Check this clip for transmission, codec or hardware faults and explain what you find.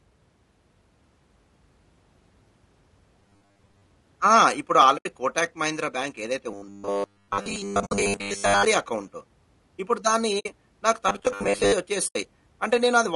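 The speech shows three transmission and codec faults: constant compression damage, three stretches of robotic buzz, and four brief dropouts.

Throughout, the voice sounds rough and grainy with noise between harmonics, likely low-delay AAC compression (AAC-ELD at 32 kbps). The damage is steady rather than intermittent.

From 3.20 to 3.91 s, 6.51 to 8.65 s and 11.09 to 11.73 s there is robotic sound from repeated short buffers. A rigid 100 Hz metallic buzz tracks the words. It is likely caused by re-playing the last 10 ms chunk, which fits a 10 ms buffer. About half the first stretch and most of the later two are repeats. Unlike the codec roughness, the buzz has a fixed pitch.

AAC frame loss with muting leaves soft-edged holes: 80 ms at 4.97 s, 60 ms at 7.85 s (inside the second buzz), 60 ms at 10.39 s and 80 ms at 12.07 s. The decoder zeroed the lost frames and the overlapping windows faded around them. 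These are silences, not buzz.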